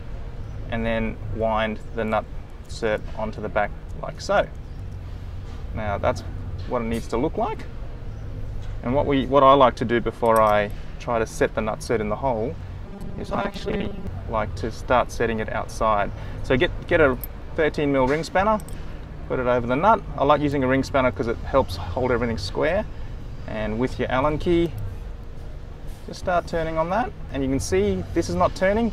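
From 12.86 to 14.07 s you get robotic sound from repeated short buffers, a rigid metallic buzz near 200 Hz, likely from a 5 ms chunk looped while roughly half the real audio gets skipped.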